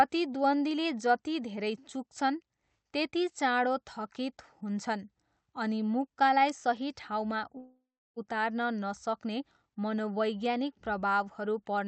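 From 7.57 to 8.18 s the speech stalls in a call audio freeze: the last sound trails into a fading buzz or hiss, then about 0.33 s of silence, likely from the jitter buffer running dry. Unlike a dropout, the speech resumes exactly where it stopped, now about 0.59 s late.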